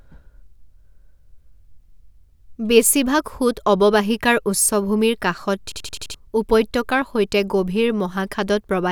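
At 5.72 s the playback system stalls in a system hang loop: the driver or host stops supplying new audio while the hardware keeps replaying its ring buffer. One 85 ms slice of speech repeats exactly, about five times, until 6.14 s, which fits a 4096-sample buffer. At 11.7 repeats per second this comes across as a rapid, mechanical stutter rather than a buzz, and around 0.4 s of real speech is lost.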